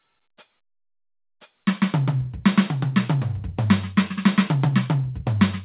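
No technical faults are audible.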